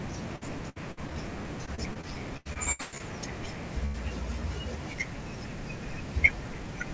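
From 0.36 to 1.14 s and again from 1.66 to 3.02 s the speech turns choppy and robotic. This is repeated packet loss, with five and then ten short holes each patched by extending the previous sound. The longest hole is 66 ms in the first stretch and 112 ms in the second, where about 30% of the span is filler. Unlike a single dropout, the gaps recur closely enough to give a choppy stutter. At 3.86 to 3.96 s a single burst of packet loss stretches the last sound into a fading tail for about 80 ms, and the speech resumes further on with that part missing. Across the clip the call path's G.722 coding leaves nothing above 8 kHz.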